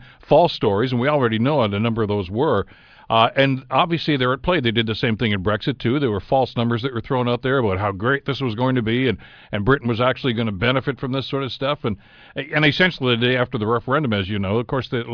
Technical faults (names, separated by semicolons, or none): none